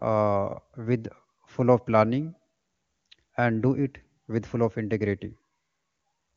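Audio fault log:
No fault to log in this speech clip.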